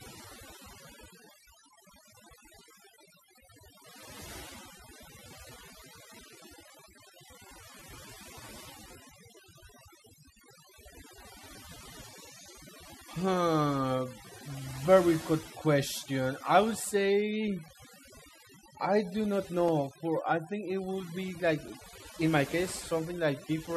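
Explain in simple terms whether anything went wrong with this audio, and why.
All the way through, the background has been pushed down and breaks up into twinkling specks. That is overdone noise removal: a noise filter set too strongly removed the background noise and also shaved off quieter parts of the voice.

From 17.68 s to 23.67 s, small ticks arrive every 2.0 s, about four in all, each a tiny gap of a few milliseconds. These are periodic USB or driver dropouts, likely a background task briefly stalling the recording connection so that bits of sound were replaced by silence.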